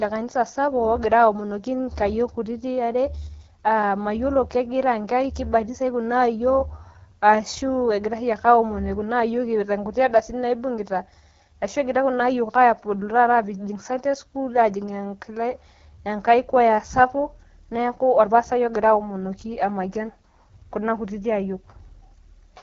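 Throughout the speech, an AMR wideband (HD Voice) codec leaves a rough, raspy edge, which fits one of its two lowest rates, near 8.85 kbit/s. Unlike narrowband telephone coding, the sound keeps energy up to about 7.5 kHz, with noise-filled hiss at the very top.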